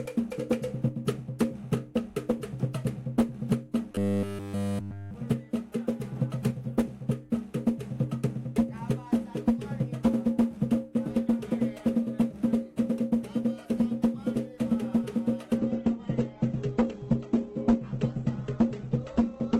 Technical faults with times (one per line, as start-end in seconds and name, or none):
3.92-5.14 robotic sound from repeated short buffers
15.58-19.60 adaptive stream at a lower bitrate